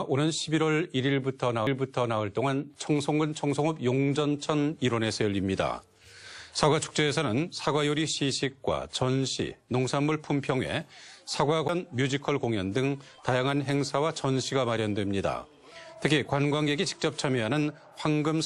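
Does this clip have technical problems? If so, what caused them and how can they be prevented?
Yes. There are two CD skips, at 1.67 s and 11.68 s. Each time, the laser jumped to a different turn of the disc's spiral and the player muted briefly, for a few milliseconds and then for about 10 ms. It then resumed elsewhere, so the audio ticks and jumps forward or back. To prevent this, clean or replace the disc, isolate the player from knocks, or rip the disc with an error-correcting ripper instead of capturing live playback.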